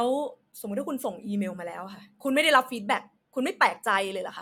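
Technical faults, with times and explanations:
Nothing technical goes wrong anywhere in this speech recording; there's nothing here to flag.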